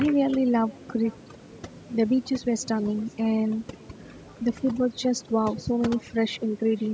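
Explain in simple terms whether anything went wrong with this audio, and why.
Overdone noise removal: noise reduction was set too strong, so throughout the clip the background sinks to near silence with twinkling specks.

Echo with no canceller: the other end's loudspeaker leaked into its microphone and nothing cancelled it, so every phrase returns about half a second later as a faint, thin copy.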